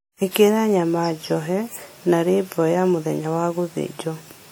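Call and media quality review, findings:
Ringing, washy texture on the speech for the whole clip. Hiss rises and falls with the signal. Content reaches 20.1 kHz. Likely WMA compression, near 48 kbps. Long transform blocks smear quantisation noise over tens of milliseconds; weak spectral lines dropped.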